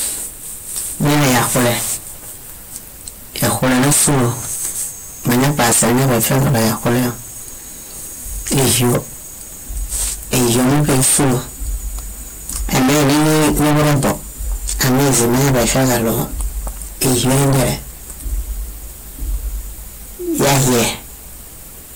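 Hard clipping runs through the whole speech clip: overdriven by about 38 dB, nearly a third of samples hit flat-topped limits, giving harsh fuzz and bright harmonic smearing up the spectrogram.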